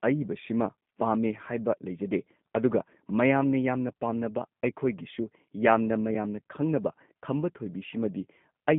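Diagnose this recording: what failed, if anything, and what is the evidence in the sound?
Codec stage: G.729 coding throughout leaves the speech rough and synthetic, squeezed into 150 Hz–3.5 kHz, with the spectrogram blank above 3.6 kHz, consistent with an 8 kbit/s stream.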